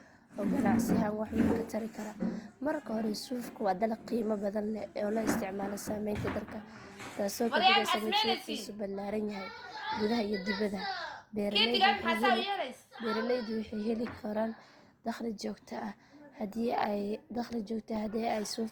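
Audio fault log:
Throughout, Opus compression. The speech sounds rough and grainy rather than swirly, and the codec damage is plainly audible. The bandwidth stays full, reaching 20.1 kHz. The likely cause is Opus in its music mode, which fits a low rate near 24 kbps. Short of bits, the encoder keeps each band's energy but refills fine detail with folded copies of lower bands or with noise. That substitution gives tones their grainy texture.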